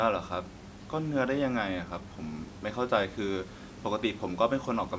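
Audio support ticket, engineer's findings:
No faults found in the speech; the call microphone processing is working as expected, with the lowest bass rolled off and nothing above 8 kHz.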